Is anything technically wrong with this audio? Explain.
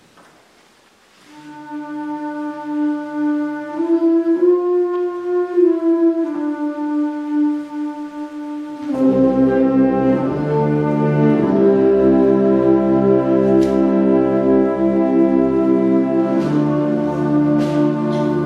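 No, nothing technically wrong can be heard here, and the signal stays steady and intact throughout the recording.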